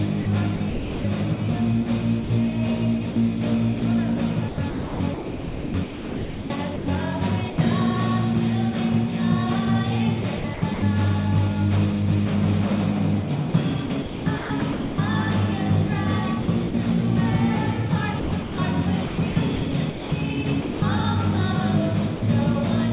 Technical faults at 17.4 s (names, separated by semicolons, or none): none